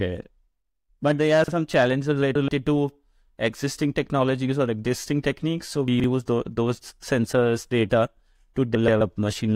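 At 1.44–1.52 s, just after "but there are", chunks out of order: one 40 ms chunk plays a slot late, giving a brief jumble. At 5.88–6.04 s, after "or existing techniques so", a 40 ms chunk lands three slots late. Frames out of order at 2.23–2.49 s, just before "to existing technologies or", and again at 8.75–9.01 s swap two neighbouring 128 ms halves. This produces a longer garbled flutter rather than one displaced fragment.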